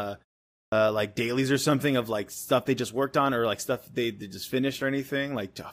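At 0.67 s the output device, idle through the 0.51 s pause before it, had not finished waking and relocking, so about 52 ms of sound up to 0.72 s is lost. This clipped start after a pause makes speech burst abruptly from silence, missing its opening sounds.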